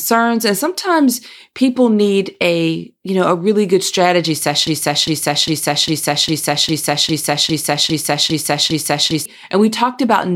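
A broken-record loop runs from 4.67 s to 9.26 s, right after "a really good strategy". A fragment of about 0.40 s repeats exactly, back to back, 11 times, giving a stuttering, mechanical cycle in place of continuing speech. The likely cause is a player, encoder or stream that stalled and kept re-sending the last piece it held, so the speech that belonged in those four and a half seconds is missing.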